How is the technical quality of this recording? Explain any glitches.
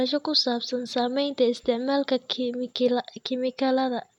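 No technical faults are audible in this speech recording; there are no glitches to explain.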